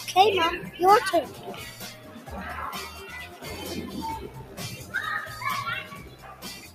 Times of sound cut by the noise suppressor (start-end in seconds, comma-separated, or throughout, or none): 1.31-1.46, 1.71-2.29, 3.28-3.44, 4.44-4.59, 5.90-6.44